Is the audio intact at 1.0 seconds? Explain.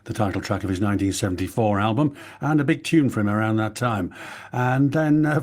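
Yes, at 1.0 seconds the speech plays through intact, with no audible fault at that moment.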